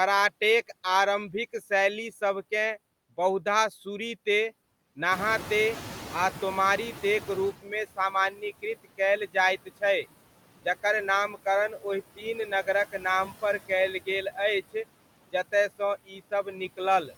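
Noise suppressor artifacts run through the whole speech clip. The suppressor pulls the steady background down by about 17 dB frame by frame, so the noise sinks between the words and rises under them. Noise suppressor catching up appears from 5.11 to 7.55 s. The room noise jumps by about 16 dB near 5 s, and the noise estimate needs about 2.4 s to follow, so the noise first passes with only about 12 dB of reduction before sinking. Speech cut by the noise suppressor occurs at 7.62–9.0 s, 9.34–10.06 s, 11.33–11.85 s, 12.16–13.7 s and 15.32–17.13 s. In these stretches the suppressor mistakes parts of the speech for noise and ducks them by about 11 to 18 dB, leaving short pieces, a fraction of a second each, swallowed or faint.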